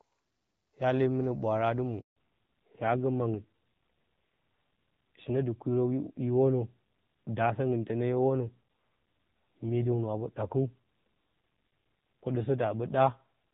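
At 2.00 s, just after "mɨnə ɓwaara adɨ mwo", the speech cuts out in a handover gap. The call moved between networks, and no speech frames arrived while the link switched. The voice fades within a few tens of milliseconds and stays silent for 160 ms, until 2.16 s. Anything said in that window is gone. It sounds like a brief hole punched into the sentence.

From 2.16 s to the end, there is a fallback to narrowband. Before the gap, the call sounds like HD Voice, consistent with AMR-WB at about 12.65 kbit/s, with only light codec damage. After the switch, nothing above 4 kHz remains. The sound points to AMR-NB at around 7.4 kbit/s. The speech turns dull and muffled. Sibilants lose their edge, and a rough, grainy texture appears.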